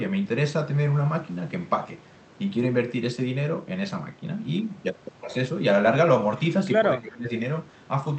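Speech clip with speech suppressed in double talk from 6.98 to 7.31 s: the level drops by roughly 20 dB, likely from an echo canceller ducking both sides during overlap.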